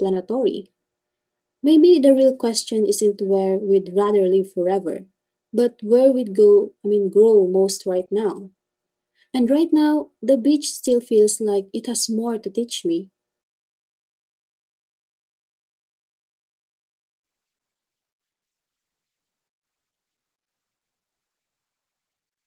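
At 2.17 to 2.23 s, 4.03 to 4.09 s, 7.97 to 8.03 s and 10.85 to 10.91 s, about 40 ms of speech is a lost packet rebuilt from error correction. Each sounds briefly rougher and noisier, with no gap, which points to two lost packets replaced by low-bitrate copies. At 12.27 s a 20 ms stretch, likely one packet, is rebuilt the same way. At 8.05 to 8.09 s comes a short concealed packet loss: about 20 ms never arrived. The decoder extended the preceding sound to fill it, leaving a brief smear.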